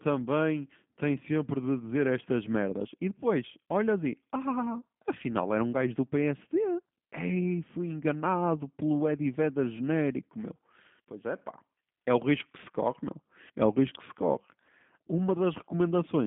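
From start to finish the speech carries G.729 codec damage: rough, synthetic 8 kbit/s rebuild, line band 150 Hz to 3.5 kHz, spectrogram empty above 3.7 kHz.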